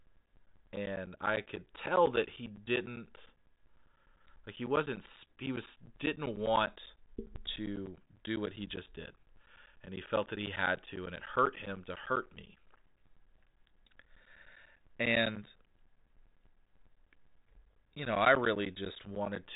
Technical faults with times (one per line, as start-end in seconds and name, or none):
0.06-19.46 periodic USB or driver dropouts